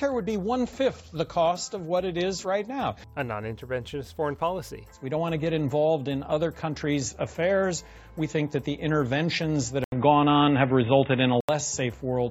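At 9.84 s there's a short gap of about 80 ms, then the sound goes dull and boxy, with nothing above 3.8 kHz, a level shift of roughly 5 dB and a faint new noise floor. It's likely an input switched to a poorer device, and it holds until 11.49 s.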